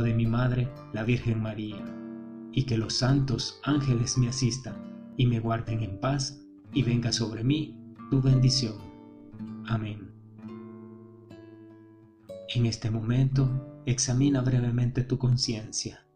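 The audio has a constant buzz from start to end. This is overlap-add ripple. The level swings by about 6 dB at a rate of around 100 Hz. That gives a metallic buzz with extra tones around each note. The sound was split into windowed frames and joined again. The overlapping windows did not add up to a steady gain. So the level rises and dips once per frame, at roughly 100 frames a second. There are also clock drift buffer slips. A click recurs every 2.04 s, from 1.05 s to 15.32 s. That makes about seven clicks in all. The timing is very regular, which points to two devices on separate clocks. The likely cause is a clock mismatch of a couple of hundred parts per million. The buffer between the devices slowly drifts until a small block is dropped or repeated. That fits a jump of around 15 samples at each click.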